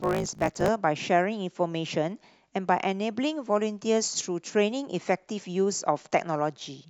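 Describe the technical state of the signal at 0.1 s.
At 0.1 s the speech carries a block size mismatch (truncated), running from 0.00 to 0.69 s. Each block, which fits a 1024-sample size, loses its tail before the next stage reads it, giving a 54.4 Hz buzz and speech hurried about 1.16 times at nearly normal pitch. A sample-rate error would shift pitch along with speed.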